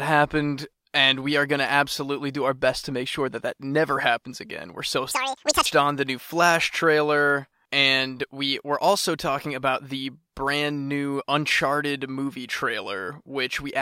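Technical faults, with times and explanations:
5.11 to 5.66 s, audio read two samples at a time (double speed): for just over half a second the speech rushes by at twice its pace and jumps a full octave, 12 semitones, higher. The playback side treated each pair of samples as a single frame, as if the stream held two channels or samples twice as wide, so it ran through the material twice as fast.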